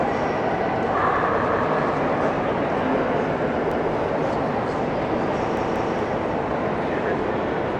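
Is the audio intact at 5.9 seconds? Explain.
No. A repeated buffer runs from 5.57 to 5.94 s. Fresh audio failed to reach the output in time, so the device played the block it already held twice more. That block lasts about 186 ms, which fits an 8192-sample buffer. The same short piece of sound therefore plays three times in a row, with a hard join at each restart. It is heard as a short stutter rather than a click, and almost no audio goes missing.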